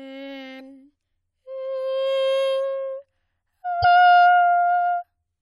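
A brief glitch cuts through the music at 0.56 to 0.61 s, and a second one of the same kind follows at 3.80 to 3.85 s, each lasting about 44 ms. Both come from damaged data in a compressed stream: bytes in the encoded file at those points were corrupted, so the decoder misread those frames, lost its place in the stream and produced a glitch until it locked back onto a valid frame boundary.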